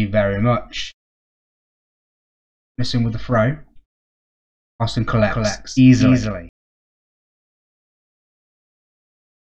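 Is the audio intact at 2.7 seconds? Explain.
Yes, the audio is intact at 2.7 seconds, with no dropout, click, distortion or other fault heard at that moment.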